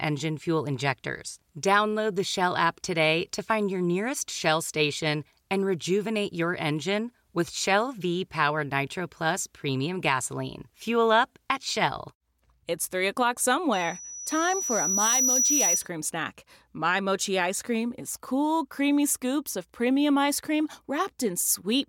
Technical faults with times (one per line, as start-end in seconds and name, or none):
13.73-15.89 loudspeaker feedback squeal